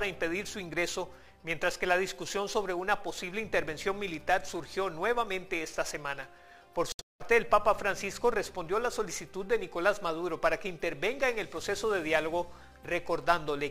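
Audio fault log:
6.92 to 7.22 s, Bluetooth dropout: the sound cuts out abruptly in broken gaps, the longest about 0.19 s, likely from packets arriving too late. Playback resumes further on, as if it never paused.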